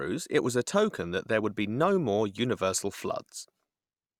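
No technical faults occur at any point in the speech, so there is nothing to describe in time order.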